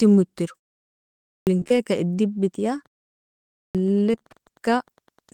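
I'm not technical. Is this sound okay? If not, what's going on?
No, it isn't fully okay. There are four separate problems, all in this short speech clip.

The first is a clipped start after a pause, and it happens twice. At 1.3 s and again at 3.57 s, speech resumes after a silence of just under a second. The playback device had gone to sleep during that quiet spell. It took time to wake up. About 0.17 s of sound was lost each time, so the speech jumps in abruptly, missing its opening sounds.

Right after the first clipped start comes short concealed packet loss. Three back-to-back moments are affected: 1.59 to 1.64 s, 1.64 to 1.68 s, and 1.68 to 1.72 s. Each time, about 20 ms of audio never arrived. The receiving end covered each gap by stretching the last bit of sound, then blended back in. You hear a brief smear or wobble rather than a clean dropout.

From 2.47 s to the end, there is Wi-Fi interference. 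A nearby Wi-Fi radio is leaking into the audio circuit. Its regular signal repeats every 102.4 ms, which is about ten times a second. That gives a faint, steady ticking under the speech. It is quiet compared with the voice, but it keeps going to the end of the clip.

Between 4.12 and 4.25 s there is repeated packet loss, the kind that makes speech sound robotic. Four small pieces went missing in quick succession, none longer than about 18 ms. Each was patched by stretching the sound before it. About 40 percent of this short stretch is patched rather than real. That makes it sound choppy.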